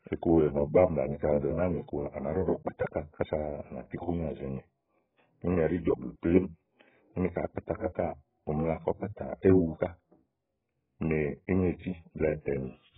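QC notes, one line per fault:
throughout AAC compression: nothing above 3.7 kHz, dull smeared speech with warbling sibilants, likely from heavy AAC-LC coding at a very low bitrate, about 8 kbps.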